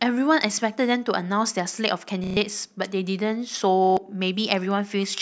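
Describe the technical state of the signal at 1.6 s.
At 1.6 s the speech signal is intact, with no audible dropout, distortion, glitch or other technical fault at that point.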